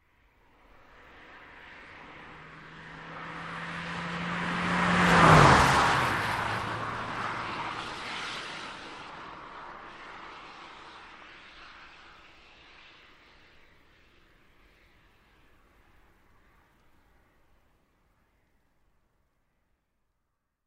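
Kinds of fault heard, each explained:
No technical faults are audible.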